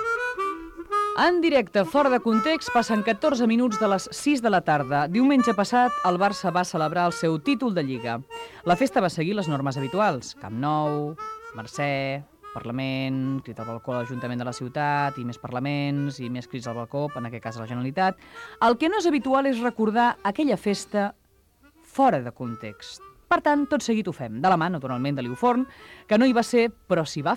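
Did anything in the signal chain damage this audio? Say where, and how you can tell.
Yes. The damage is in the analogue wiring. A mains buzz runs from 2.68 to 4.84 s. It is a steady, raspy buzz built on 60 Hz, with harmonics reaching into the kilohertz range. It sits roughly 35 dB below the signal. Switching spikes twice per mains cycle leaked in through poor shielding or a nearby dimmer.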